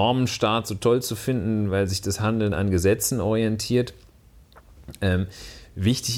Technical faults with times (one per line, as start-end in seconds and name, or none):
none